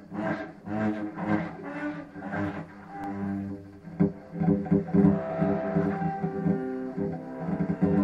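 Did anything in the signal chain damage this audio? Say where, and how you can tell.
Yes, a repeated buffer at the driver/buffer stage: a tiny click at 3.04 s, where a roughly 2.9 ms chunk played twice, which fits a 128-sample buffer underrun.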